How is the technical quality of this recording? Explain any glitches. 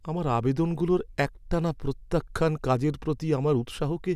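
The technical quality of the recording is sound, with no glitches to explain.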